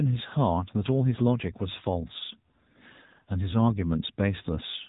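From start to finish the speech carries AMR narrowband mobile codec damage, plainly audible. Nothing passes above about 3.8 kHz, and the low-bit vocal-tract model, with its sparse pulse excitation, leaves a buzzy, synthetic edge that fits the 7.95 kbps AMR-NB mode.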